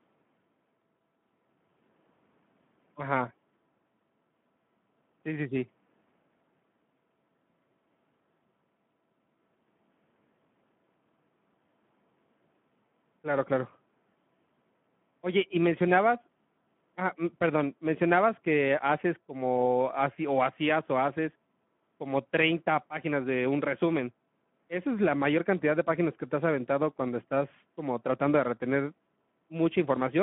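From start to finish the speech carries Speex codec damage, and it's plainly audible: the CELP coder is starved of excitation bits, which fits a rate around 11 kbps, so the speech comes out hoarse and grainy. The band sits at 150 Hz to 3.4 kHz, with nothing above 3.7 kHz.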